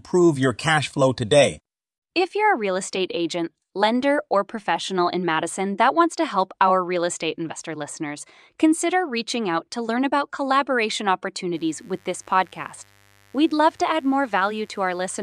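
From 11.55 s to the end, a mains buzz sits under the speech. Sharp switching spikes from the 50 Hz supply leak into the signal twice per cycle. Their harmonics climb into the kilohertz range. The result is a steady, raspy buzz, fairly low in level.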